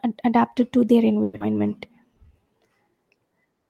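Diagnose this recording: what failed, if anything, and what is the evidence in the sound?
At 1.23 s, just after "adapted to their", the speech gives way to a synthetic buzzy continuation of the last sound. It fades over about 170 ms, and audio resumes at 1.42 s. It never drops to true silence. About 80 ms of material is simply missing, and the timing after the gap shifts by roughly 50 ms. The cause is likely a long network dropout. Packets stopped arriving, and the receiver's concealment filled the hole by extending the last sound until real audio returned.

From 1.91 s to 2.45 s the speech slows to about 90% of normal speed with its pitch unchanged. Sounds are audibly drawn out, adding about 62 ms. This is a jitter buffer slow-down at the network receive stage. The buffer was short of reserve or had raised its target delay. To build depth, it repeated individual pitch periods and small pause fragments many times, stretching the audio in time without changing pitch.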